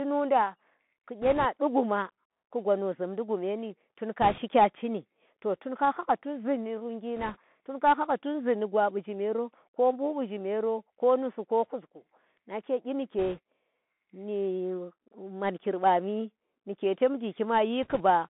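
Throughout, the speech carries the Bluetooth CVSD headset codec sound, which fits a 64 kbps CVSD link. The band runs from about 200 Hz to 3.5 kHz, s sounds are scratchy, and a granular hiss sits underneath. Unlike a plain low-pass, loud bright sounds smear where the step size can't keep up.

Bit errors on a Bluetooth voice link come in five short bursts: 1.22–1.46 s, 4.22–4.39 s (just before "cini to tun ka"), 7.16–7.38 s (between "hhahga tun zee ndi" and "tun ka hanga tunzi"), 13.19–13.40 s and 17.83–18.02 s. Each is a rushing crackle spread over the speech, from an error rate of a few percent. There are no sharp clicks or gaps, because each flipped bit only nudges the signal slightly, and the error fades.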